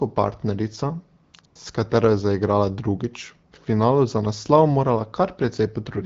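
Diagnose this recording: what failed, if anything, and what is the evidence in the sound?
The failure is AMR comfort noise, at the codec's discontinuous-transmission stage. Around 1.23 to 1.33 s, 1.41 to 1.43 s and 1.45 to 1.55 s the real background drops out and a smooth, steady hiss takes over, switching in and out in short bursts. The sender judged those moments silent and stopped sending speech frames, so the receiver synthesised noise from a rough level-and-spectrum sketch, which can clip soft sounds at those edges. The wideband coding around it sounds clean, which fits a 12.65 kbit/s AMR-WB rate.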